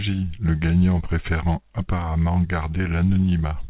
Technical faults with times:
none

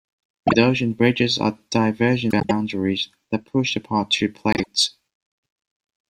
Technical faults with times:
0.47-0.55 frames out of order
2.30-2.51 frames out of order
4.53-4.67 frames out of order

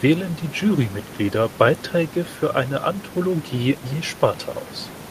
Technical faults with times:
none

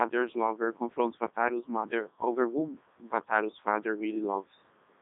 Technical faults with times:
0.00-5.01 Codec 2 vocoder

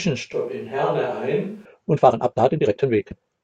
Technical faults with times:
0.33-1.65 switch to a distant microphone
1.90-3.43 time-stretched section

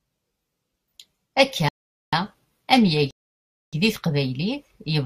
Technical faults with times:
1.69-2.13 rebuffering stall
3.11-3.73 rebuffering stall

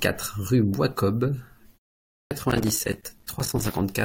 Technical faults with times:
2.24-2.31 clipped start after a pause
2.50-3.80 processor overload crackle

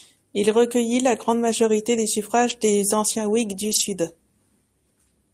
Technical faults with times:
2.49-2.51 lost packet rebuilt from error correction
3.63-3.81 lost packet rebuilt from error correction

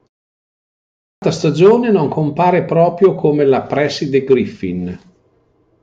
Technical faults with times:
0.66-1.22 clipped start after a pause

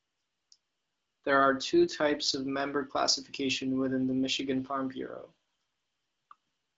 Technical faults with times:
none

